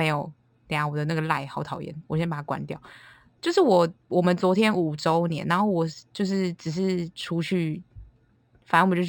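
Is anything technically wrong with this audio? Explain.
Yes. Throughout the speech there is imaging from linear upsampling. The band stops near 6 kHz and is dulled just below it, while a faint mirror copy of the spectrum sits between 6 and 12 kHz, roughly 30 dB under the signal. That pattern fits audio at a 12 kHz rate raised to 48 kHz by straight-line interpolation, which is too weak a filter to remove the images. The result is a light metallic shimmer on sibilants.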